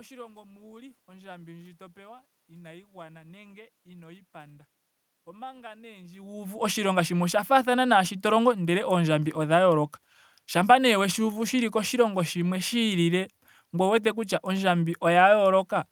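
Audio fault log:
No audio fault to log.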